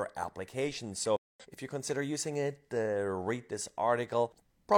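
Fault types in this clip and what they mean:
Corrupt frame muted: speech cuts abruptly to silence from 1.16 to 1.46 s, a 0.29 s hole suggesting several damaged compressed frames rejected by the decoder and replaced with silence.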